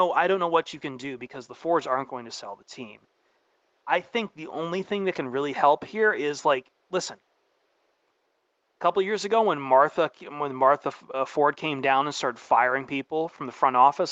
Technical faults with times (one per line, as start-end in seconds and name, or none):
none